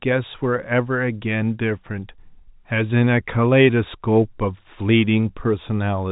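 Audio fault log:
No faults heard anywhere in the speech recording.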